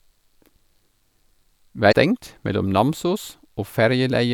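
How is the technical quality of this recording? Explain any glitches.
There is one glitch. From 1.89 to 1.93 s, about 40 ms, there is a short burst of damaged data in a compressed stream. Part of the encoded speech was corrupted, so the decoder misread those frames, lost its place and had to hunt for the next valid frame header before resuming. The result is a brief chirp, squawk, click or short hole.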